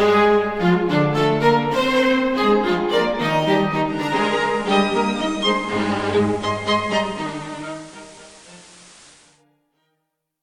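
A hybrid receiver drops into digital radio blending to analogue FM at 3.84 s, crossfading over about 410 ms. The level dips about 2 dB, and hiss sits roughly 25 dB down until it returns at 9.45 s.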